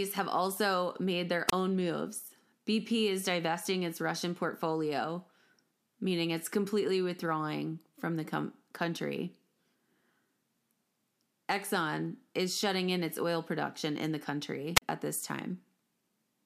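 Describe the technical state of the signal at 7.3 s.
Around 7.3 s the speech signal is intact, with no audible fault at that moment.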